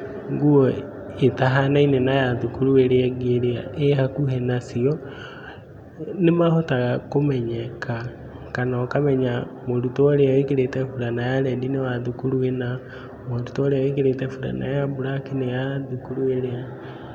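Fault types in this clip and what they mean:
Nothing to flag here; I didn't hear any technical fault anywhere in this speech recording.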